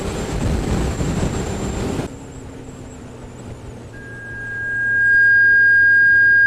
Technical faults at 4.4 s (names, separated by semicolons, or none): loudspeaker feedback squeal